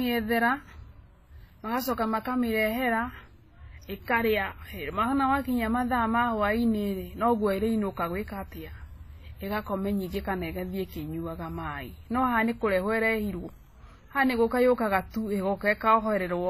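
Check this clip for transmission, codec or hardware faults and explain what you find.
The speech has one codec fault, present for the whole clip. Throughout, the artefacts of different codecs are heard together on the speech and nothing reaches above 14.9 kHz. This is likely transcoding between lossy codecs, consistent with a low-bitrate WMA encode later re-encoded as HE-AAC.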